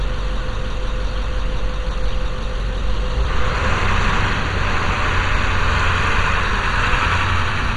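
Throughout, heavy MP2 compression is audible. Nothing reaches above about 11.2 kHz, so the sound is dull. Upper bands flicker and gurgle, which fits a low bitrate near 56 kbps.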